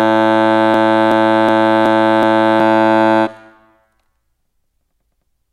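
From 0.74 to 2.60 s a system hang loop sets in: the machine stalls while the audio hardware keeps replaying one ring buffer of about 0.37 s, which fits a 16384-sample buffer. The music stutters, repeating that fragment five times at 2.69 Hz, and around two seconds of audio are lost.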